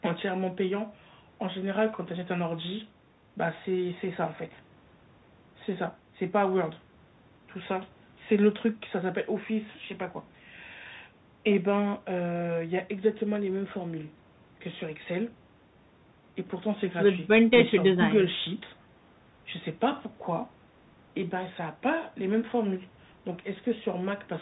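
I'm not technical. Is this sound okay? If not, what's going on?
No. Throughout the clip the speech sounds muffled and telephone-like, with scratchy s sounds and a fine grainy hiss underneath. That's the Bluetooth CVSD headset codec: it sends each tiny slice of sound as just up or down, and lets nothing above 4 kHz through.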